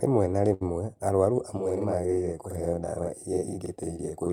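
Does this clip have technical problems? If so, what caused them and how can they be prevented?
Yes. From 0.53 to 0.64 s there is a short stall from a late packet: a packet arrived late, the jitter buffer ran dry, and the receiver held the last sound for about 74 ms before resuming where it left off. Unlike packet loss, nothing is skipped. A larger or adaptive jitter buffer prevents it.

From 1.57 s to the end, a channel delay causes doubling. One channel lags by 46.44 ms, which fits a 2048-sample buffer, and summing to mono adds a single slap at equal level. Unlike room echo, it has no decaying tail. Aligning channels before the mono sum prevents it.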